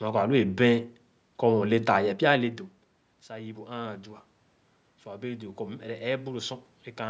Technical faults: automatic gain rising

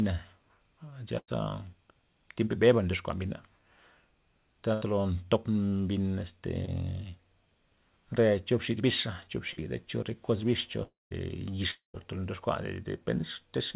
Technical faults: burst of packet loss; short concealed packet loss; long network dropout

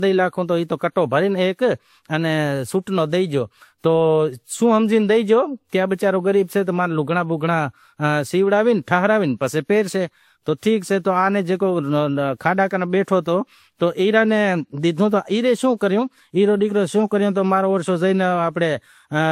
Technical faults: transcoding between lossy codecs

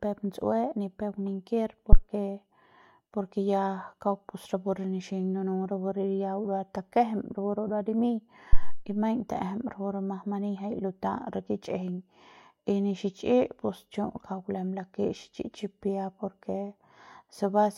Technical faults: phantom power thump

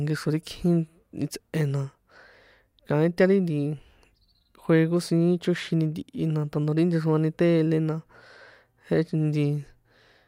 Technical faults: none

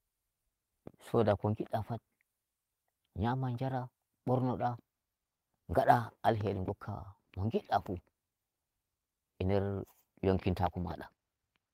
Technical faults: lost packet rebuilt from error correction

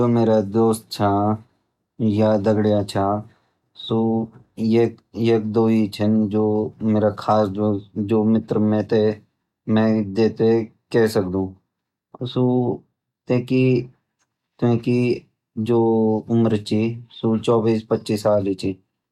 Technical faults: hard clipping

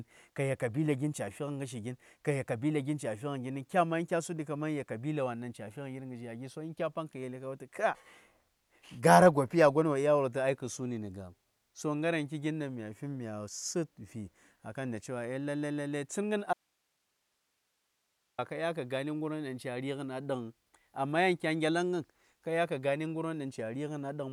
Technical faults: audio dropout to a faint residue

